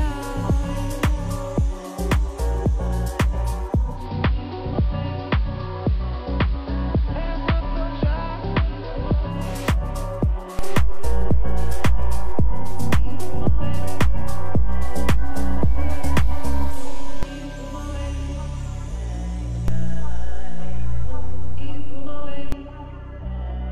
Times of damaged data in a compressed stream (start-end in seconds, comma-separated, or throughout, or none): none